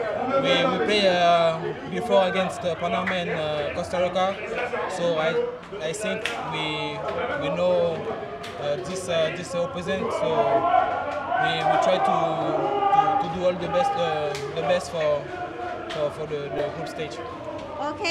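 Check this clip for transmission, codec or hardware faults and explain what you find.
One hardware-side fault stands out, a repeated buffer at 16.58 s. New audio failed to arrive in time, so the same block of about 5.3 ms, consistent with a 256-sample buffer, played twice more with hard joins. It sounds like a brief buzzy click rather than silence, which separates it from a dropout.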